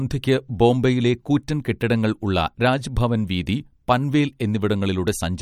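Throughout the speech there is plainly audible damage, likely from MP3 compression at a low rate, around 55 kbps. Sibilants chirp metallically and the sound turns watery. A spectrogram shows a hard ceiling at 18.7 kHz and speckled, flickering gaps where weak components drop out.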